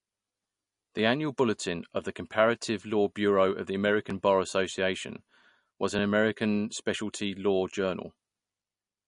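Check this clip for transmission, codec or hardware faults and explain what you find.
Two faults stand out in this speech: codec damage throughout, and one brief skip early on.

Throughout the clip there is MP3 compression, with plainly audible damage. The watery, swirling texture and the hard treble ceiling are likely the result of a low-bitrate MP3 encode, consistent with roughly 40 kbps. The encoder discards everything above 10.6 kHz and lets weak spectral detail flicker between frames. On a spectrogram this shows as a flat cutoff and speckled, patchy high bands.

At 1.39 s, just before "of the", there is a dropped buffer (overrun). A few milliseconds of samples were likely overwritten before the program could collect them, so the surrounding audio is spliced directly together. This is heard as a jump in the sound. In the waveform it appears as an abrupt discontinuity with no silent gap.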